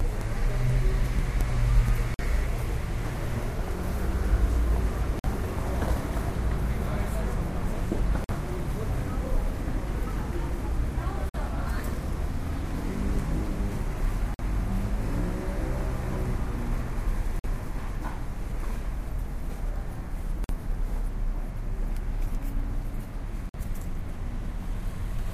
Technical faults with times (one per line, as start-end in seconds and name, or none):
2.14-2.19 gap between chunks
5.19-5.24 gap between chunks
8.24-8.29 gap between chunks
11.29-11.34 gap between chunks
14.34-14.39 gap between chunks
17.39-17.44 gap between chunks
20.44-20.49 gap between chunks
23.49-23.54 gap between chunks